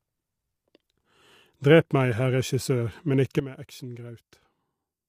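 A speech clip with plainly audible coding damage throughout: the voice sounds rough and grainy, with noise filling the gaps between harmonics and a thin, artificial-sounding top band. This is likely low-delay AAC compression (AAC-ELD), whose short frames resolve pitch poorly, and the degree of damage fits a bitrate around 32 kbps. At 3.40 s the level drops abruptly by about 12 dB and stays down to the end, with the background noise falling in step, which points to a sudden gain jump applied without a ramp.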